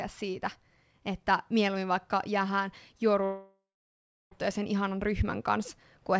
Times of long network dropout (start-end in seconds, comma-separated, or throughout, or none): 3.24-4.33